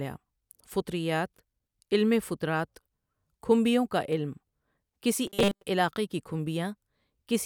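From 5.27 to 5.63 s, just before "علاقے کی", the speech turns into a rigid, metallic buzz at 200 Hz that only loosely tracks the syllables. This is robotic sound from repeated short buffers. The likely cause is audio arriving too seldom, so playback covers the gap by looping a tiny fragment. A 200 Hz pitch fits a 5 ms buffer, and most of that stretch appears to be repeats rather than fresh audio.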